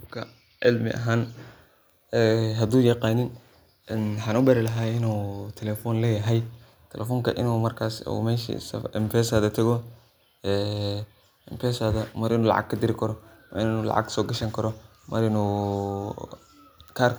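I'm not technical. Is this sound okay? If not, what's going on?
Yes, this speech recording sounds okay. There's nothing here that points to a technical problem.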